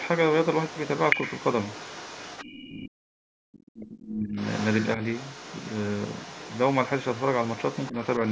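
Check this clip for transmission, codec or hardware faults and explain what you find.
Two echo-canceller problems appear in this speech recording, both affecting the near talker's microphone path. The call's normal microphone processing, with nothing above 8 kHz, is not among them.

Other side's voice leaking through, from 0 to 2.71 s, 4.37 to 4.88 s and 5.04 to 8.31 s: the far end's audio, played on a loudspeaker, likely escaped the echo canceller. A second, fainter voice runs underneath, about 15 dB below the talker at first and about 20 dB below in the last stretch.

Speech suppressed in double talk, from 2.69 to 4.36 s and briefly at 7.90 to 7.95 s: with both sides talking, the canceller likely couldn't separate them and turned everything down. The talker's voice dips, around 40 dB at its deepest over roughly one and a half seconds, then a dip of about 10 dB.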